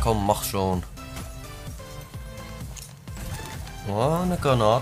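No technical faults can be heard anywhere in the audio.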